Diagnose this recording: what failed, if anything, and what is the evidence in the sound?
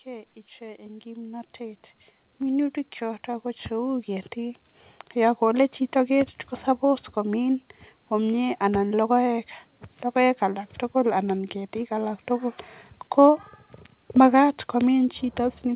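Automatic gain rising in the call processing: from 0.05 to 5.72 s, speech and background swell together by about 16 dB, levelling off before "chito ketie ko". The AGC found the input too quiet and ramped its gain slowly. The waveform envelope widens steadily, and the spectrogram brightens uniformly, noise floor included, below the G.711 path's 4 kHz ceiling.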